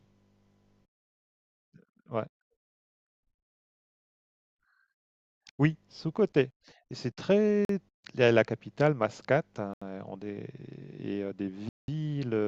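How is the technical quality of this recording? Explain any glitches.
The speech drops out to silence three times, each gap longer than the last: 7.65 to 7.69 s (43 ms), 9.74 to 9.82 s (81 ms), and 11.69 to 11.88 s (191 ms). After each gap the speech resumes as if paused. This is likely a Bluetooth stall: interference delayed packets, the receiver's buffer emptied, and playback halted until retransmissions arrived.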